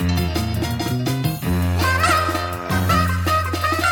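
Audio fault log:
Throughout, wrong sample rate: the audio runs 1.5 times faster than it should, and its pitch is raised by about seven semitones, roughly a musical fifth. Because speed and pitch shift together by the same ratio, the samples are being clocked out too quickly with no rate conversion. A 1.5 ratio fits material captured at 32 kHz being played back at 48 kHz, so everything sounds high and hurried.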